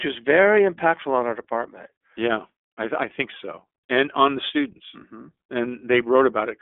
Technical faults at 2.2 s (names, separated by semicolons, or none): iLBC codec